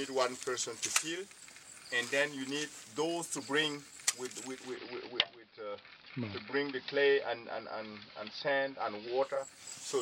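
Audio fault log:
4.45–9.55 s, digital radio blending to analogue: the receiver cross-fades over about a third of a second to the station's AM broadcast, adding hiss roughly 35 dB down and AM's narrower treble, then blends back. The loudness holds steady, unlike a plain filter or gain change.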